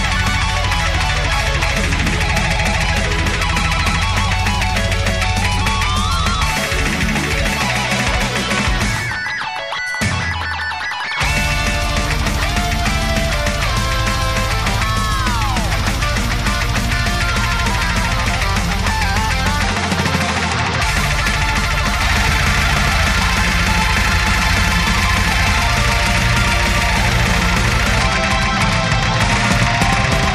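From 22.02 s to the end, a doubled audio track appears. A full-band copy trails by roughly a tenth of a second, somewhat quieter. It starts abruptly, likely from a second, slower capture path.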